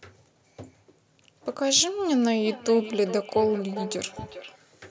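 From 2.45 s to 4.6 s, a feedback echo between two devices sets in. A second device on the same call in the room plays back the first microphone's signal, that microphone picks it up again, and its echo canceller can't remove sound coming from another device's loudspeaker. The speech therefore returns at a steady interval of roughly 0.4 s, thinner and more ringing than the original, peaking at about 13 dB below the speech, over the call processing's band that stops at 8 kHz.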